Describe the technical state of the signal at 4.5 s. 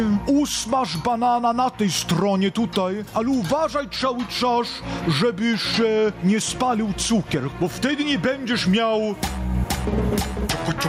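Gain pumping is present at 4.5 s, as it is throughout the clip. The input gain is likely set far too high, so a fast limiter or compressor clamps down on each loud sound and then lets go. The level swings by roughly 15 dB. Loud and quiet passages sit unnaturally close in level, leaving the sound squashed.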